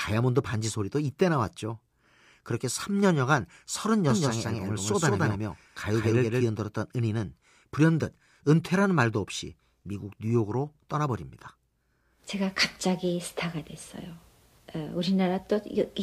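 From 4.10 to 6.44 s the speech is heard twice, a second full-band copy trailing about a fifth of a second behind at roughly equal loudness, dry and cutting in and out abruptly. This doubled audio track likely comes from the signal being captured again through a slower path.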